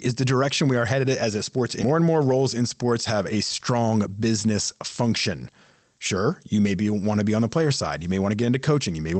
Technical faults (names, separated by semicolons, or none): skip ahead; jitter buffer speed-up